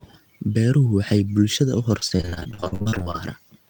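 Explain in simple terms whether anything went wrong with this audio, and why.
Repeated packet loss (robotic sound) affects 1.99 to 3.16 s. Bits of the speech kept getting lost on the way, leaving about twenty short holes of up to 65 ms. Each hole was patched by stretching the last sound, so nearly half that stretch sounds choppy and robotic.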